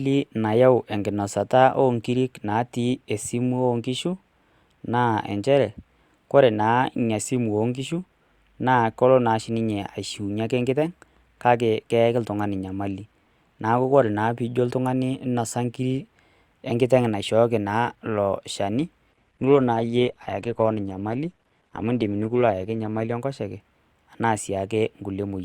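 An adaptive stream at a lower bitrate takes over from 19.11 to 23.11 s, ending just before "enkoshoke anaa". The connection slowed, so the player switched to a leaner encoding of the same speech, which fits a drop from about 64 to 16 kbit/s Opus. The treble is suddenly cut, leaving nothing above 12.4 kHz, and codec artefacts grow more noticeable. The change happens with no gap in the audio.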